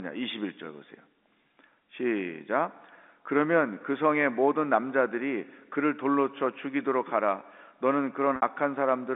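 At 8.36 to 8.42 s, packet loss with pitch repetition bridges a 60 ms gap, which fits about three lost packets, with a briefly held, buzzy repeated pitch instead of the clean silence of a plain dropout.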